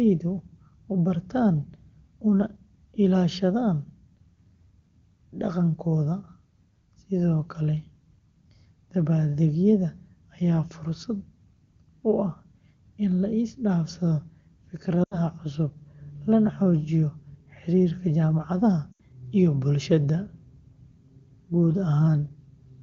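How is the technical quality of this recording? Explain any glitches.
The recording has two brief dropouts from lost AMR speech frames. They sit between 15.04 and 15.19 s and between 18.91 and 19.01 s, and the wideband coding at 23.85 kbit/s stays clean around them.

In each spot, about 80 ms of speech failed to arrive intact, which fits four 20 ms frames. The decoder bridged the gap by repeating the last good pitch and vocal tract settings while lowering the gain. You hear a short smeared, held sound that quickly fades toward silence. Because this is wideband AMR, the fade is quick.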